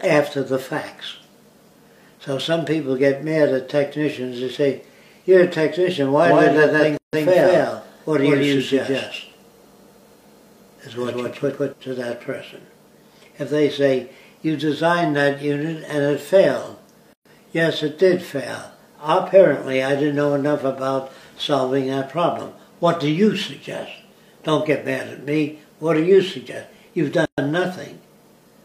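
Most likely a second, slower capture path or an edit holding two copies out of step mixed the audio in twice: from 6.25 to 11.73 s a full-band doubled audio track trails about 150 ms behind at roughly equal level, starting and stopping abruptly. Separately encoded pieces were joined without trimming encoder delay and padding, leaving a gap at each join of encoded pieces every 10 s: silences at 6.97–7.13 s (158 ms), 17.13–17.25 s (124 ms) and 27.25–27.38 s (124 ms), each with smeared edges before the sound resumes where it stopped.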